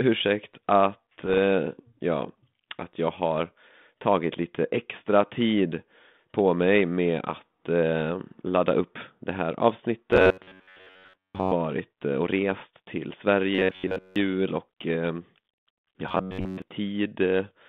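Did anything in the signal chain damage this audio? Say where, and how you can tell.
Yes. The ADPCM link took bit errors around 1.18 to 1.38 s and again around 12.51 to 12.66 s. You hear short pops and rough, gritty bursts with quick level jumps, because each flipped bit knocks the decoder's step size and predictor off track. The error rate is a few tenths of a percent, riding on an otherwise clean 32 kbit/s G.726 stream.

Then there's robotic sound from repeated short buffers, at 10.11 to 11.53 s, 13.55 to 14.16 s and 16.09 to 16.62 s. The speech turns into a stiff, metallic buzz pinned at 93.8 Hz while still loosely tracking the speech. That points to roughly 10.7 ms chunks being looped, most likely at the driver or buffer stage.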